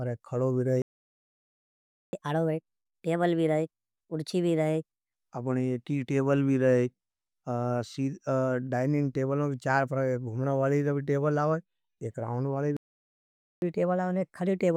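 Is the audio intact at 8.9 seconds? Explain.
Yes, the audio at 8.9 seconds is intact, with no dropout, click, distortion or other fault at that moment.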